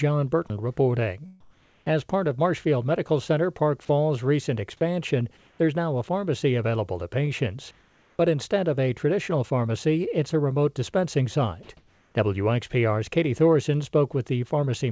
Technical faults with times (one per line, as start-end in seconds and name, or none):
0.48 sound dropped by the voice detector
0.48-1.91 comfort noise in place of the background
3.85-3.89 sound dropped by the voice detector
5.37-5.59 comfort noise in place of the background
7.71-8.19 comfort noise in place of the background
8.17 onset clipped by the voice detector
11.63-11.69 sound dropped by the voice detector
11.63-12.15 comfort noise in place of the background